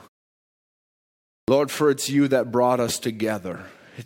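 At 1.44 s, a clipped start after a pause: following 1.44 s of silence, the output path was slow to wake, so about 40 ms is lost and "for it's you that" begins abruptly, its opening sound cut off.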